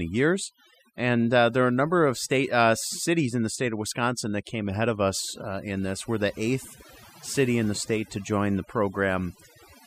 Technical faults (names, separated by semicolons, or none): overdone noise removal